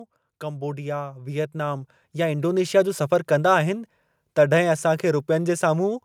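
A speech recording with automatic gain rising between 0.4 s and 2.92 s. Over those two and a half seconds the level climbs by about 10 dB. The voice and the background noise swell together, so the room tone lifts along with the speaker. That shared, gradual rise is the sign. An automatic gain control judged the input too quiet and kept pushing its gain up until it settled.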